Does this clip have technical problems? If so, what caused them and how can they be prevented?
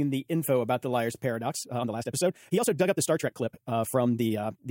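Yes. Software likely squeezed the audio from 1.41 s to the end, playing it 1.65 times faster and keeping pitch by dropping short slices. This time-stretched section makes the speech abruptly rushed at unchanged pitch. Fit the clip to length by editing or trimming rather than stretching.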